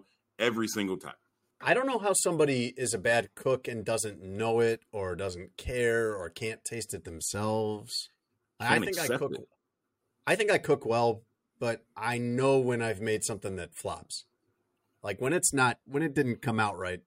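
From 9.23 to 10.26 s the speech carries CD scratch ticks: seven short clicks, none longer than about a millisecond, at a steady rate of roughly six or seven per second. A scratch on the disc corrupted more data than error correction could rebuild, so the player patched or muted the damaged samples each time that spot came round. The even spacing, locked to the disc's rotation, is what separates these ticks from random clicks or digital dropouts.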